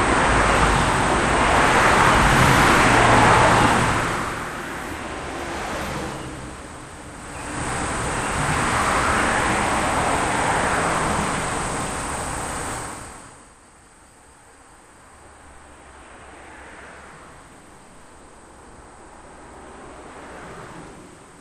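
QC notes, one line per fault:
No faults were found in these sounds. The level is smoothly turned down or back up during the clip, as with a fader, which is normal.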